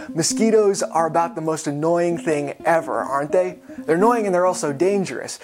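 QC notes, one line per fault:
No faults heard.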